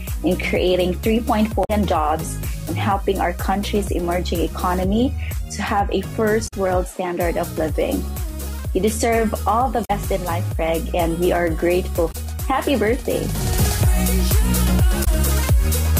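Damaged data in a compressed stream breaks the audio five times: 1.61 to 1.70 s, 6.44 to 6.53 s, 9.81 to 9.91 s, 12.08 to 12.15 s, and 15.01 to 15.08 s. Each is a short chirp, squawk, click or hole. The decoder misreads corrupt frames and loses sync.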